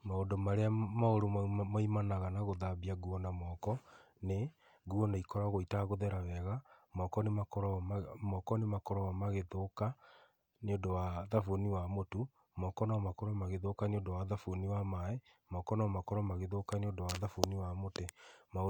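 No technical faults are audible.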